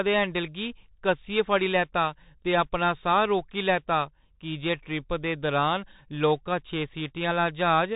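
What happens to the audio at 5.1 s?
At 5.1 s the Bluetooth CVSD headset codec is at work, as it is across the whole clip: a one-bit delta coder, which fits a 64 kbit/s stream, tracks the speech with an adapting step, cutting everything above 3.8 kHz, roughening sibilants and leaving a granular hiss beneath.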